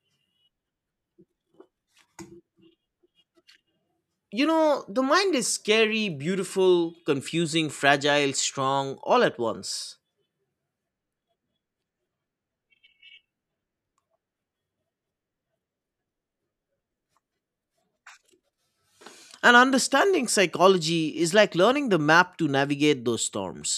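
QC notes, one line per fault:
No faults heard anywhere in the clip.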